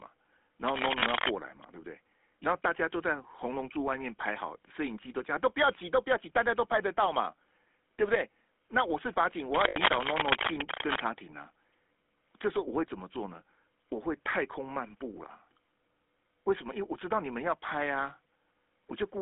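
The whole clip carries the sound of the GSM full-rate codec. The speech is squeezed into a phone band of about 250 Hz to 3.5 kHz. The coder rebuilds the voice from a vocal-tract model and a sparse pulse train. That gives a plainly buzzy, gravelly edge, which fits 13 kbps full-rate coding.

From 0.62 to 1.36 s, cable scratch noise appears. Dense, uneven bursts of rustle sit over the speech, a little louder than it. The cause is likely a worn cable or connector being moved, so its contact resistance jumps about.

Inside that scratch, lost GSM frames occur at 0.98 to 1.03 s. For about 40 ms the decoder repeats the last good frame. It sounds like a brief metallic ring, which fits two dropped 20 ms frames.

More cable scratch noise runs from 9.51 to 11.00 s. It is the same rough, scratchy rustle, again slightly above the speech level.

Lost GSM frames come again at 9.68 to 9.77 s. This gap is about 80 ms, so the held, metallic ring lasts longer. 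That fits four lost frames.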